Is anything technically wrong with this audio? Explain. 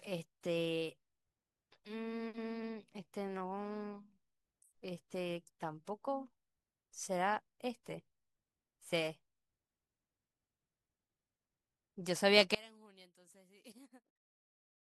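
Yes. From 12.55 s to the end at 14.85 s, the speech collapses by about 29 dB to a faint residue, likely one channel inverted cancelling the shared centre content. A dropout would leave silence instead.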